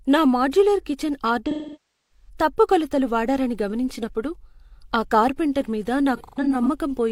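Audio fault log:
1.50–2.29 s, AAC frame loss with concealment: about 0.6 s of sound is missing, which fits a run of roughly 14 lost frames. The decoder keeps reusing the last good spectrum with scrambled phase, so the sound smears into a noisy, phasey wash that sinks toward silence before fading back in. On a spectrogram, harmonic striations blur into a flat, decaying smudge. The waveform envelope sags and then recovers.
6.16–6.68 s, AAC frame loss with concealment: several shorter losses totalling about 0.3 s are scattered across half a second, with the longest gap around 150 ms. Each is filled the same way, so it is heard as brief smeared, hissy patches rather than a full dropout. A spectrogram shows a few narrow blurred vertical strips, and the waveform shows small dips in level.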